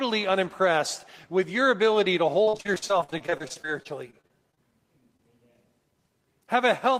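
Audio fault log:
2.43–4.59 s, repeated packet loss (robotic sound): some two dozen short holes, none longer than about 43 ms, each patched by stretching the preceding sound before the next dropout arrives. About a quarter of this stretch is synthetic fill, giving choppy, robotic speech.
5.17–5.21 s, short concealed packet loss: roughly 20 ms of audio failed to arrive in time, so the receiver extended the prior sound across the hole and cross-faded back into real speech, leaving a brief smear or wobble.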